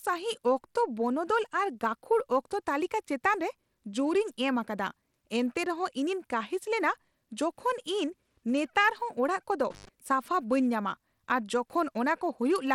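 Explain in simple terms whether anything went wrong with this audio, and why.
The speech sounds gritty throughout, with thin, flickering treble. That plainly audible damage most likely comes from Bluetooth SBC compression starving the high frequencies of data.

From 9.71 to 9.89 s the sound briefly cuts out, with crackles at the edges. That's an intermittent contact, where a loose plug or cable opens for a moment.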